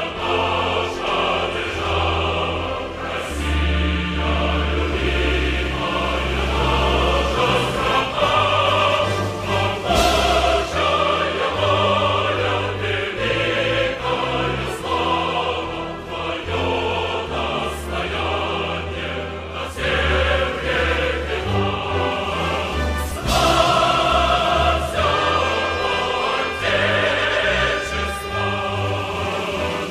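From 1.07 s to 8.01 s the audio carries a doubled audio track: a second, full-band copy of the same sound trails the original by roughly a tenth of a second, sitting about 5 dB lower. The copy adds no decay or room colour, so it reads as a hard slapback rather than reverb, and it appears and disappears abruptly at those two times. The likely cause is the signal being captured again through a slower path and mixed back in.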